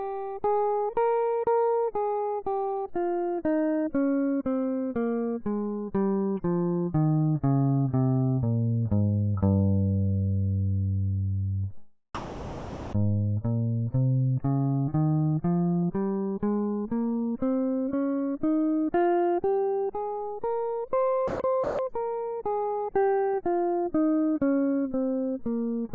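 From 12.15 to 12.93 s, comfort noise in place of the background takes over for 0.78 s. The music's real background gives way to a steady, featureless hiss, about 26 dB down. Likely cause: the sender paused transmission, and the receiver synthesised noise shaped like the background.

At 21.28 to 21.40 s and again at 21.64 to 21.79 s, sound dropped by the voice detector leaves two gaps of 0.12 and 0.15 s. The music briefly turns to flat noise, then returns. The detector likely mistook the music for background.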